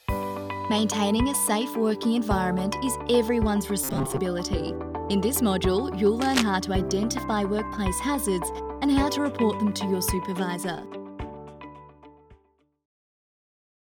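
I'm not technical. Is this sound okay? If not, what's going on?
No. Robotic sound from repeated short buffers appears from 3.84 to 4.19 s. For about a third of a second the audio turns into a stiff, metallic buzz pitched around 134 Hz. The likely cause is new audio arriving too slowly, so the software keeps replaying a tiny slice of about 7.5 ms to fill the gap. Most of the real sound in that stretch is skipped, and the constant repetition forces that fixed buzzing pitch.

Cable scratch noise follows from 6.20 to 6.44 s. For roughly a quarter of a second, a burst of rough, crackly scratching sits on top of the sound, only a little quieter than the sound itself. This is likely a worn cable, plug or control being moved. Its electrical contact flickers rapidly, and each flicker adds an uneven spurt of noise, which together are heard as scratching or rustling.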